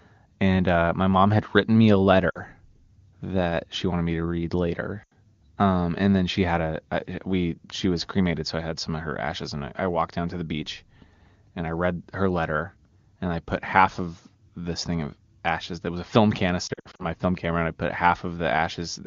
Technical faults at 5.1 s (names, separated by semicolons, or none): lost AMR speech frames